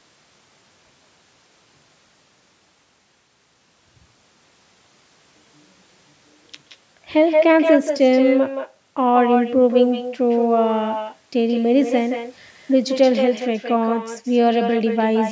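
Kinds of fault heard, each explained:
Echo with no canceller: throughout, the speech is shadowed about 150 ms later by a thin copy only about 5 dB quieter. The far end plays the call through a loudspeaker, its microphone picks that up, and nothing removes it.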